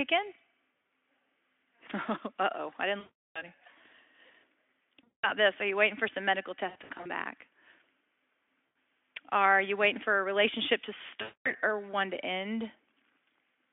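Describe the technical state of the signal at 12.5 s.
At 12.5 s the speech comes through intact, with no fault to be heard at that moment.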